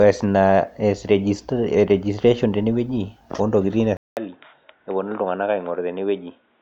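Input switched to a poorer device at 3.97 s: the speech goes silent for about 200 ms, then returns duller and boxier until the end, with nothing above 3.8 kHz, a level drop of roughly 5 dB, and a new background noise floor sitting somewhere around 45 dB below the voice. The likely cause is the recording input changing mid-take to a narrower-band microphone or a headset's call profile, which brings its own bandwidth limit, gain and noise.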